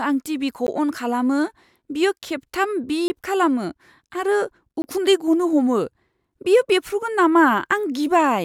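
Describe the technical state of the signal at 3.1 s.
Just before 3.1 s, between 3.08 and 3.10 s, a block of digital silence occurs: a 20 ms run of samples dropped to silence, which fits a buffer not filled in time. The sound cuts off and returns abruptly, heard as a short hole before "खालामो आरो उखुन्दै".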